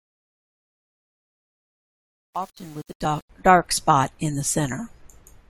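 Speech fades in from silence over the first 3.3 s, and that rise sounds gritty and grainy from 0.0 to about 3.25 s. This is truncation distortion on a fade: the gain stage keeps only about 8 bits without dither, so the low-level waveform collapses into coarse square steps. Two tiny clicks or skips land at 3.05 s and 4.04 s, about one second apart. That spacing points to overlap between stream segments of 1-second length, where the player trims a few milliseconds of overlapping time and the waveform jumps at each join.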